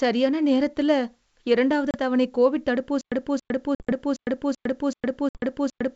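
At 1.91 s a hard-edged hole of 30 ms opens in the speech, and the sound returns slightly distorted before settling. This is packet loss on an ADPCM call. A few packets vanished, and the decoder's predictor and step size drifted out of step with the sender's.

From 3.01 s to the end, the same 0.28 s burst repeats every 0.38 s, eight times, each followed by 106 ms of digital silence. This is a stutter with silent gaps, likely from a stream that stalled and replayed its last fragment at each retry, so the audio meant for that stretch is lost.

Inside it, more packet loss strikes at 3.75 to 3.93 s, with 80 ms missing across 120 ms, and at 5.29 to 5.41 s, with 60 ms missing. Each leaves the same abrupt holes, followed by briefly distorted speech.

Throughout, the G.722 wideband coding, consistent with 64 kbit/s, keeps the speech clear up to 7 kHz.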